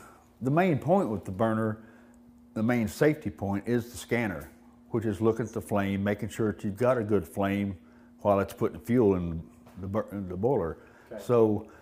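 There are no technical faults to describe.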